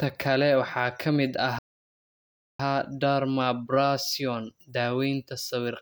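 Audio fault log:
1.59–2.60 s, playback stall: right after "kale waxaa ka mid" the speech stops dead and goes silent for about 1.0 s, then resumes with "dermabrasion daawaynta". The player likely ran short of data or was briefly blocked, so output halted until it caught up.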